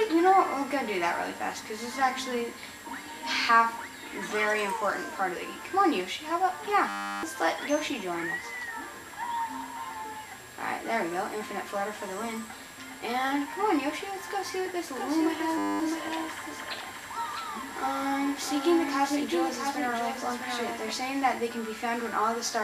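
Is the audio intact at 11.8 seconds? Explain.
Yes, the audio at 11.8 seconds is intact, with no dropout, click, distortion or other fault at that moment.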